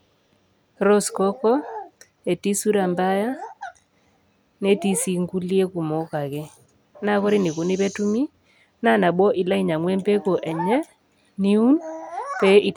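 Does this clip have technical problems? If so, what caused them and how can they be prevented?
No, there's nothing technically wrong to point to here, so there's no cause to track down and nothing in particular to guard against.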